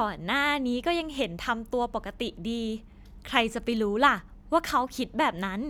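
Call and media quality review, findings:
No audible faults found in the speech on review; nothing to flag against any component in the signal path.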